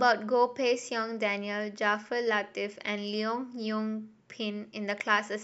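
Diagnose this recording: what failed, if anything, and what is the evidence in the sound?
Nothing failed here; listening through, there's no point in the speech where any stage of the chain gives itself away.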